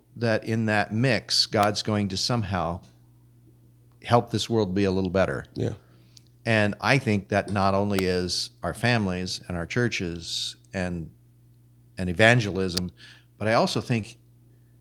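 At 1.63 s, 7.99 s and 12.77 s, sharp snaps sit on top of the speech, each a few milliseconds long. These are electrical switching spikes, most likely arcs from a nearby switch, motor or static discharge coupled into the audio line.

At 14.01 s to 14.05 s, a brief smear interrupts the speech: short concealed packet loss. About 20 ms of audio failed to arrive, and the decoder bridged 18 ms by extending the preceding sound before blending back into the real signal.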